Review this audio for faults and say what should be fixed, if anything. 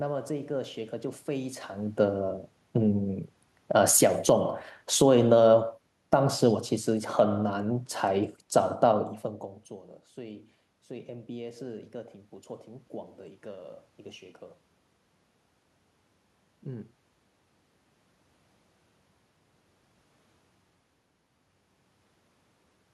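Automatic gain falling runs from 2.79 s to 8.37 s. The automatic gain control judged the input too loud, or its background noise too strong, and eased its gain down by about 7 dB across those five and a half seconds. The level sinks steadily, and the room noise sinks with it, which separates this from the talker moving at around 1.5 s and 9 s, where only the voice level shifts. To prevent it, set the input level correctly so the control never sees an overload, or fix the gain for recording.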